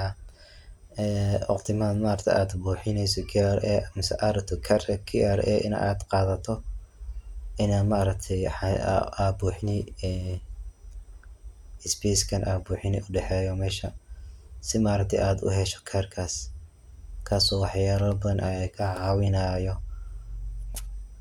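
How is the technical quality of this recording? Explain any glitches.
No glitches can be heard anywhere in this recording.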